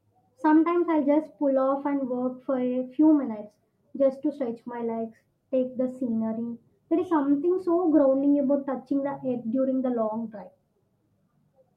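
Clock drift between sender and receiver runs through the whole recording. The sending device's audio clock is running fast, by something like 4 percent, so speech arrives a little quicker than the receiver plays it out. Its jitter buffer keeps filling beyond its target, and the receiver has to keep discarding small slices of audio to stop latency building up. The result is an unsteady, faintly hurried delivery rather than one clean break.

Repeated timing corrections occur from 0.31 s to 11.70 s, the receiver's response to that surplus. Short pieces of speech are cut out again and again, always in the same direction, giving an effective playback rate of 104 percent. The cuts fall at uneven intervals, and each one is small. Together they sound like slight hiccups and a rhythm that skips forward now and then.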